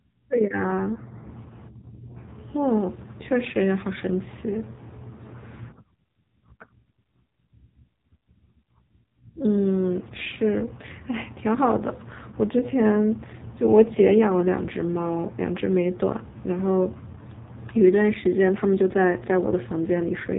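From start to finish the speech sounds buzzy, thin and synthetic, as if spoken through an old mobile phone, with nothing above 3.8 kHz and a heavily smeared, robotic texture. This is the AMR narrowband mobile codec at work: it rebuilds the voice from a vocal-tract model excited by a few pulses per subframe, and the heavy damage points to one of its lowest modes, which fits a bitrate around 5.9 kbps.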